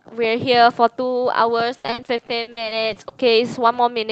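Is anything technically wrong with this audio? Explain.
Yes. From 1.77 s to 3.25 s the speech suffers repeated packet loss, giving a robotic sound. Around fourteen short dropouts hit this stretch, the longest about 70 ms. Each gap is papered over by stretching the previous audio, so about 30 percent of the span is concealed. The voice turns choppy. A spectrogram shows smeared, repeated harmonic bands and abrupt breaks. The waveform shows stuttering, copy-like segments. The call path's codec caps the top end near 8 kHz.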